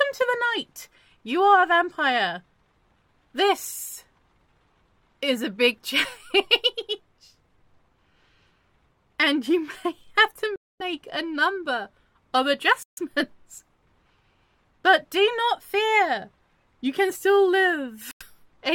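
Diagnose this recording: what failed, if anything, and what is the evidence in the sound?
The wireless link to the headphones faltered, likely a Bluetooth stall: held-up packets let the playback buffer run empty. The sound cuts to silence at 10.56 to 10.82 s, 12.83 to 12.99 s and 18.11 to 18.22 s, gaps of 0.24, 0.14 and 0.09 s, before resuming.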